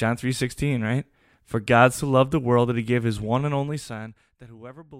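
From 3.47 to 4.5 s, just after "he gave his one", a fine ticking or zipping rides on the speech as the level drops by roughly 20 dB. This is zipper noise: the gain is lowered in coarse 1 dB steps, around twenty per second, with no smoothing between them, so every jump leaves a small click in the waveform.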